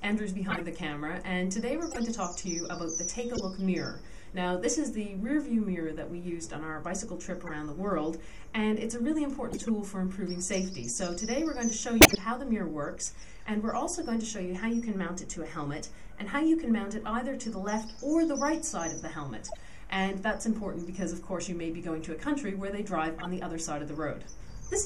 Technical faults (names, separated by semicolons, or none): corrupt frame decoded